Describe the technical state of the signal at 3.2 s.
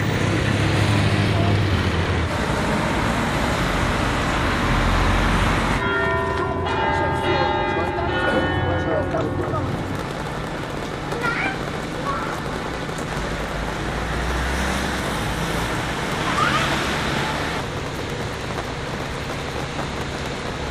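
At 3.2 s the signal is intact, with no audible fault.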